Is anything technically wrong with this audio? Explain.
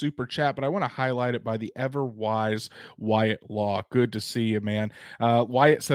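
No, nothing technically wrong stood out on listening to this speech recording.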